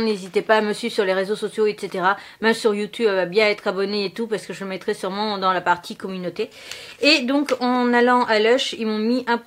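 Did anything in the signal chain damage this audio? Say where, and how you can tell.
No, nothing along the chain left an audible mark here; the sound comes across steady and intact, with nothing to point to at any stage.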